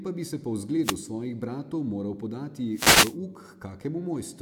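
At 0.81 to 0.98 s, after "pa bi se po", and at 2.72 to 3.17 s, wireless microphone noise hits: the FM radio link fades into a swish of static rather than a silent dropout.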